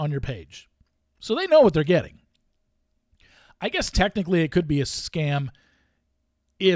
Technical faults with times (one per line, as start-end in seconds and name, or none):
none